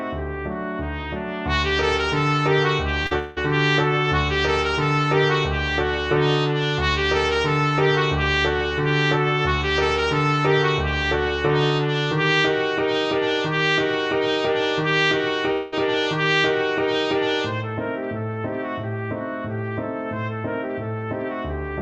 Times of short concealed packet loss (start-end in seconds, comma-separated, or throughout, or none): 3.03-3.13